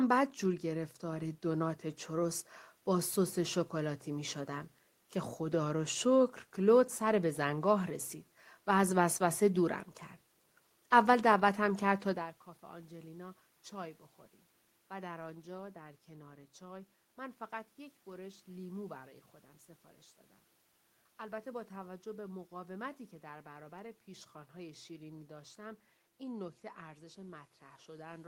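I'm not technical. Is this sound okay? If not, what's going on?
Yes, this sound is okay, and the change in loudness around 12 seconds is just the talker moving relative to the microphone.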